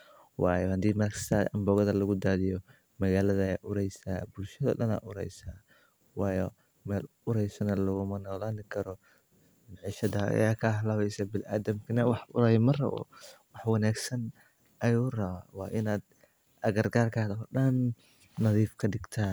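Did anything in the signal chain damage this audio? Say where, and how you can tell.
No, nothing in this signal chain damaged the audio.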